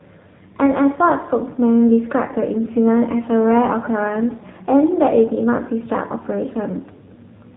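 Throughout, the speech shows AMR narrowband mobile codec damage: nothing above 3.8 kHz, and a plainly buzzy, synthetic texture from low-bitrate vocal-tract modelling, which fits AMR-NB near 7.4 kbps.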